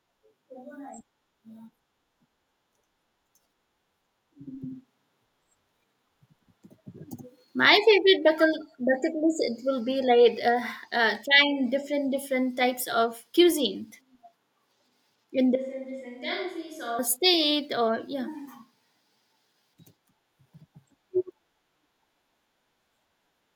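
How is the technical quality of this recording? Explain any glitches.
One glitch stands out: a switch to a distant microphone from 15.56 to 16.99 s. The close microphone's feed likely dropped out, leaving a pickup further away. The speech abruptly turns hollow and roomy, thinner in the bass, about 10 dB quieter and noisier, then snaps back.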